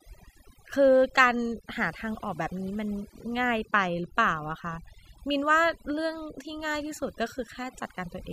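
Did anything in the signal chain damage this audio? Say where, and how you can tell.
Yes, at the processing stage: overdone noise removal, present throughout. A suppressor set far too strong cuts each frequency band that sits near its noise estimate, so the background drops and breaks up into twinkling specks, and quieter speech detail vanishes.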